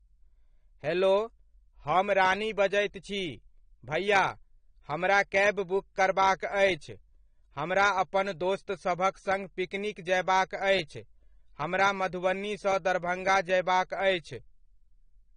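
From start to finish the speech sounds dull and smeared, with a warbling, fizzy edge on sibilants and held vowels, and nothing is present above about 9.7 kHz. This is AAC compression, likely AAC-LC at a low bitrate, with the character fitting something near 32 kbps. Short of bits, the encoder lowers its cut-off and quantises the remaining spectrum coarsely, leaving gaps and noisy bands that warble and fizz.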